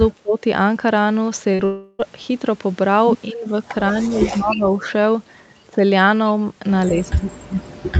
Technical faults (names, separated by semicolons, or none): speech suppressed in double talk; short concealed packet loss; long network dropout; echo leak